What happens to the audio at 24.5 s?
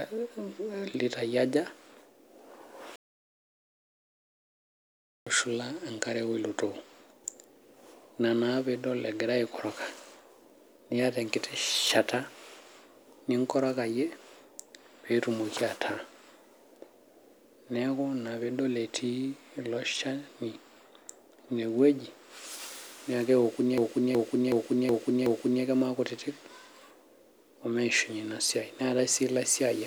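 At 24.5 s the speech is caught in a system hang loop from 23.78 to 25.64 s. The driver stalled while the hardware replayed one 0.37 s buffer, which fits a 16384-sample ring, five times at 2.69 Hz, producing a skipping-record repeat.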